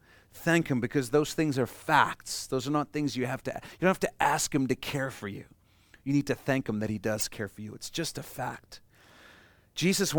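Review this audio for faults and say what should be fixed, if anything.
A corrupt frame was decoded at 7.18 to 7.21 s. Flipped bits in what sounds like a couple of compressed frames were played anyway, so misread gains and codes put energy at the wrong frequencies, giving a brief chirp-like burst over the speech, with the error peaking around -20 dBFS. Adding error detection and having the decoder conceal damaged frames instead of playing them would prevent it.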